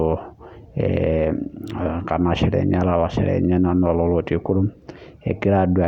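No technical fault can be heard anywhere in this speech recording. No moment in it stands out as needing comment.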